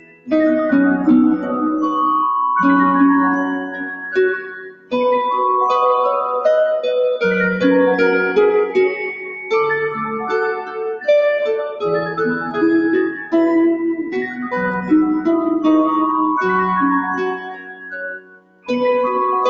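A speech noise suppressor runs across the whole clip. It treats sustained sound as noise, so levels swing by about 10 dB and the sound pumps. Its cuts on the sound land at 0.0–0.32, 3.6–4.93, 9.13–9.52, 10.54–11.07, 11.69–12.59, 13.1–13.34, 13.99–14.46 and 17.32–18.7 s. Held tones and tails sink, by about 19 dB at worst in the first, second and last spans.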